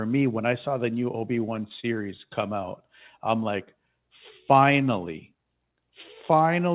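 From 1.56 to 2.44 s, just before "out I'm like finally", the speech hits repeated stalls (stutter): the jitter buffer ran dry five times, and each gap, the longest about 29 ms, was filled by stretching the preceding sound. Nothing drops out, but the phrase drags and judders. On a spectrogram, already empty above 4 kHz from the G.711 call path, short smeared, repeated slices interrupt the harmonics.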